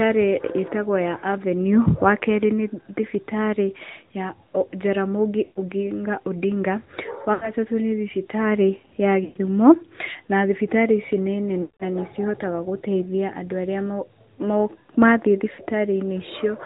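Throughout, the speech carries the AMR narrowband mobile codec at around 10.2 kbps: nothing above 4 kHz survives, and the pulse-driven vocal tract model leaves a plainly buzzy, synthetic edge. That is unlike a simple low-pass filter, which dulls the sound without adding that artificial grain.

Lost AMR speech frames then interrupt it at 5.44–5.60 s, 7.34–7.52 s just before "nĩ thibitarĩ ya", 9.24–9.37 s just after "nĩ thibitarĩ ya", 11.62–11.84 s between "na thibitarĩ ici nĩ" and "nanĩ cihotaga gũteithia andũ", and 15.54–15.61 s. The decoder stretches the last good pitch with falling gain, so each gap smears and fades rather than clicking or going dead. The longest, about 180 ms, fits nine lost 20 ms frames.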